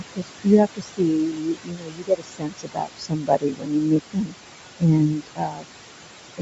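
From the first moment to the end, noise suppressor artifacts run under the speech. The room noise, sitting only about 11 dB below the voice, is pulled down by about 21 dB between phrases and lifts again beneath them. The leftover hiss warbles and flutters as the suppressor re-judges each frame. On a spectrogram the noise floor turns patchy and mottled, dark in the gaps and speckled with short isolated flecks. In the waveform the pauses flatten almost to silence.

Also present throughout is a grainy, breathy edge on the voice, likely from Bluetooth LC3 compression. The codec damage is plainly audible, with a roughness that fits a mid-range setting around 48 kbps in 10 ms frames. The upper band loses fine detail and is partly refilled with noise. On a spectrogram the top of the speech band looks blocky and smeared, in vertical strips matching the frame length. The call microphone processing shows as nothing above 8 kHz, a clean ceiling across the whole clip.

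The suppressor also does real damage as speech cut by the noise suppressor. This happens from 0.0 to 0.48 s, across most of 0.65 to 4.35 s, and again from 5.07 to 5.66 s. In each span the processor mistakes softer parts of the speech for noise and drops them by up to about 22 dB, so consonants and word tails sound swallowed or faint. The affected portions add up to roughly a third of a second, about three seconds, and about half a second. In the waveform the ends of syllables collapse abruptly, and the spectrogram shows energy clipped away in gaps where faint consonant streaks should be.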